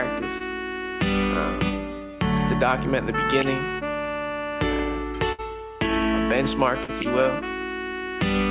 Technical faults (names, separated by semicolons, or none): short concealed packet loss; burst of packet loss